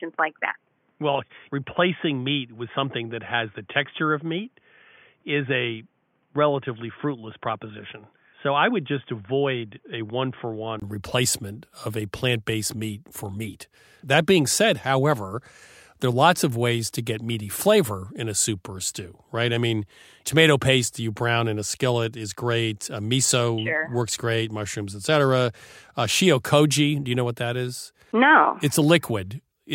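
An input switched to a poorer device covers the first 10.82 s of the speech, the likely cause being a narrower microphone or a headset call profile. Nothing passes above 3.5 kHz, so the speech sounds dull and boxy, sits about 5 dB quieter, and carries its own background noise roughly 45 dB below the signal. At 10.82 s a 20 ms silence marks the switch, after which the fuller, brighter sound returns.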